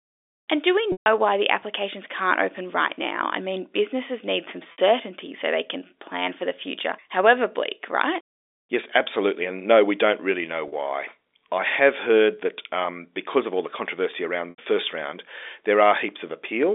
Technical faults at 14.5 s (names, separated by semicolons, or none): packet loss with pitch repetition